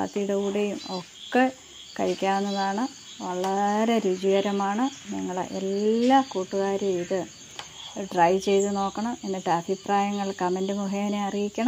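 No technical faults are audible.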